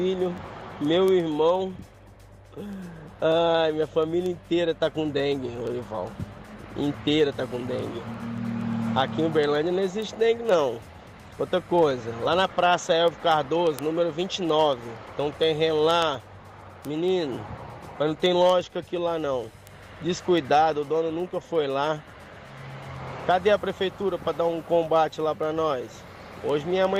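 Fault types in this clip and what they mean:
word clock ticks: from 0.14 s to 26.97 s, the receiving end of a digital link runs on its own clock, roughly 200 parts per million off the sender's. Each slip drops or repeats one sample, giving sharp ticks about ten times a second.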